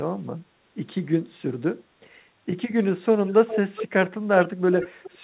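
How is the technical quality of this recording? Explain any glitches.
The recording has narrowband call audio with nothing above 4 kHz, which fits a G.711 telephone path, and one recurring glitch. Echo leak at 3.26–3.59 s, 3.75–3.88 s and 4.78–5.14 s: a speech copy trails about 0.41 s behind, fading from roughly 5 to 15 dB down. The likely cause is a speakerphone echo canceller passing its own pickup back.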